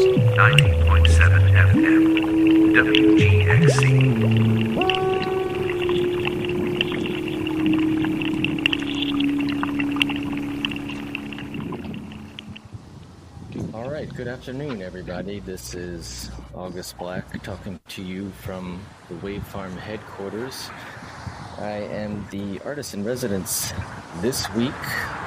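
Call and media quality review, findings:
Nothing stood out on listening; no symptoms to log against any component for this recording.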